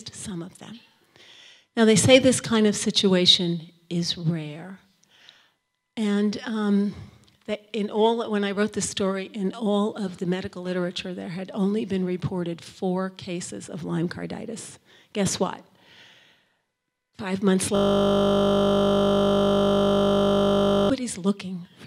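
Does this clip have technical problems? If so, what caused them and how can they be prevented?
Yes. From 17.76 s to 20.90 s there is a system hang loop: the computer or audio driver stalled while the sound hardware kept replaying the same 20 ms stretch of its ring buffer, 157 times in a row. The exact repetition produces a steady 50 Hz buzz. Unlike a dropout, which goes silent, or random glitching, which varies, the sound is perfectly regular at the loop rate. Prevent it by giving the audio thread real-time priority and fixing driver or system stalls.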